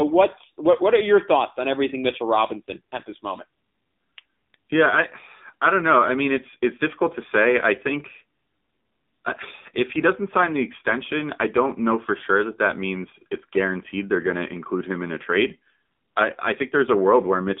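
AMR narrowband mobile codec damage runs through the whole of the speech. The voice sits in a phone-line band from about 200 Hz to 3.7 kHz, so it has no low body and no air or sibilance above that. The codec rebuilds each 20 ms frame from a vocal-tract model excited by only a few pulses. The plainly audible buzzy, synthetic edge on the voice points to a low setting near 7.4 kbps.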